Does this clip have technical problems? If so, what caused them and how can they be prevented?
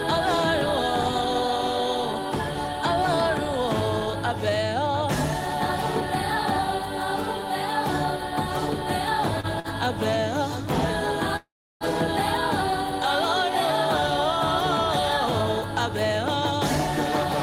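Yes. There are two short stalls from a late packet at 9.40 and 9.59 s. Each time the jitter buffer ran dry, so the last sound gets held for 31 and then 48 ms, with nothing lost. A slightly deeper adaptive jitter buffer would ride over gaps like these.

There's also a call audio freeze from 11.36 to 11.84 s. The last sound carries on and fades, dropping into 340 ms of silence, and then the audio picks up exactly where it stopped. The likely cause is packets held up in transit. Prioritising the call traffic with QoS and cutting network congestion should prevent it.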